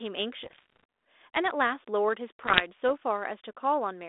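Speech carried over a narrowband ADPCM link. Its band runs from about 300 Hz to 3.6 kHz, with a light grainy texture that fits G.726 at 32 kbit/s. Two bursts of bit errors on an ADPCM link break through. The first runs from 0.42 to 0.84 s. The second runs from 2.43 to 2.89 s. Each flipped bit throws off the decoder's step size and predictor. The damage then rings on for a few milliseconds. The result is pops, rough crackle and sudden level jumps. The first burst is the denser one, with the error rate near 1.5 percent.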